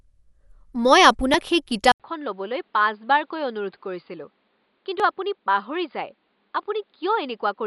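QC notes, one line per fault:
Throughout: Dolby Digital compression, likely at a low bitrate around 64 kbps. The encoder narrows the band, with nothing above 11.5 kHz, and leaves many frequency lines without mantissa bits, filling them with noise, so the speech sounds dull with plainly audible rough, fluttering grain.
1.92 s to 7.66 s: input switched to a poorer device. The input likely changes mid-recording, after a short silence of 80 ms, to a device passing a narrower band. The speech turns boxier and muffled, drops in level by roughly 10 dB, and gains a faint new background noise.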